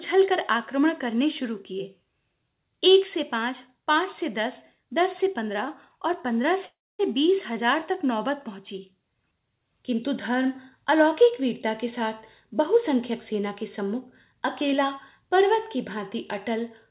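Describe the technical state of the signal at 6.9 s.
At 6.9 s the audio sits in a call audio freeze from 6.66 to 7.01 s: the last sound trails off as a fading buzz or hiss into about 0.23 s of silence, then resumes where it stopped with nothing lost, now about 0.33 s later. The likely cause is delayed packets draining the jitter buffer.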